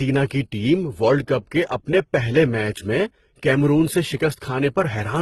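From start to end the speech has nothing above 12.1 kHz, and two different coding textures sit on top of each other: a swirly smear in the upper range and a grainy, metallic edge. This is likely transcoding between lossy codecs, consistent with a low-rate HE-AAC encode later re-encoded as Opus, where each stage adds its own damage to the last.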